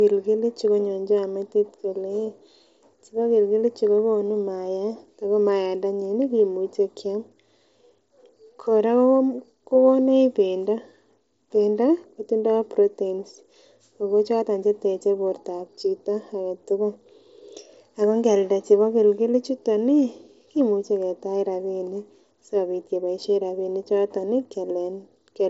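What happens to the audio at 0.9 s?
Nothing goes wrong at 0.9 s: the speech there carries through intact, with only the usual band limit of the Bluetooth mSBC headset link, which passes nothing above about 7.7 kHz.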